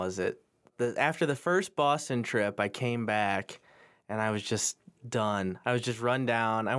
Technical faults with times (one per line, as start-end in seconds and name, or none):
none